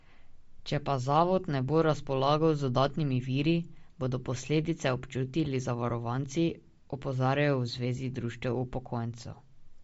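From start to finish the speech carries a plainly audible grainy, breathy edge, and the band stops sharply at 7.7 kHz. The likely cause is Bluetooth LC3 compression, whose transform coding discards upper detail when bits are scarce, which fits a low bitrate around 32 kbps and 10 ms frames. On a spectrogram the energy ends in a flat ceiling at 7.7 kHz, with speckled, blocky texture below it. The waveform looks ordinary.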